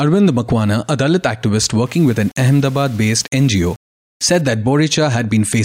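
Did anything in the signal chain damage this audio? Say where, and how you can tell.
Yes. From 1.86 to 4.41 s the speech takes on a grainy, rough distortion that rises and falls with the sound itself, and the quietest stretches turn gritty or sputter rather than fading smoothly. That points to low bit depth without dither, likely from a sample-format conversion that rounded the audio to very few levels. The error sits about 30 dB below the speech, which fits roughly 6 bits. Because no dither was added, the rounding error follows the signal and is heard as distortion rather than steady hiss.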